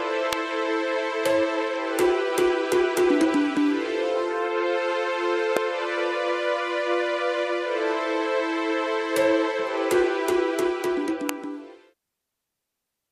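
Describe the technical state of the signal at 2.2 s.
The signal at 2.2 s is intact, with no audible fault at that moment.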